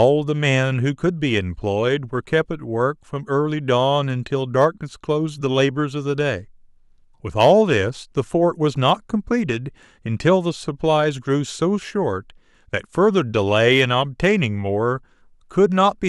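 A stage in the signal chain is being driven past the largest level it can pass, so the loudest peaks of this speech are sliced flat, producing hard clipping at 0.01–0.04 s, 4.60–4.65 s, 7.40–7.52 s, 8.88–8.91 s and 13.71–13.83 s. The overload is slight, about 1 to 4 dB, worst at 7.40 s. The flattened tops add high harmonics, heard as brief crackles riding on those peaks rather than continuous fuzz.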